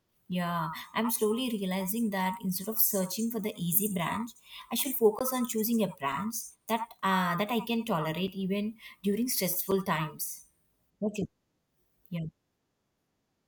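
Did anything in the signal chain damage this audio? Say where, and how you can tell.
Yes. At the driver or buffer stage, output blocks went unfilled, leaving blocks of digital silence at 5.19, 8.27 and 9.71 s, about 17, 4.5 and 5.8 ms long; the last fits a 256-sample buffer. Each cuts out and back abruptly with no fade; the two shorter ones are heard as ticks and the first as a short hole.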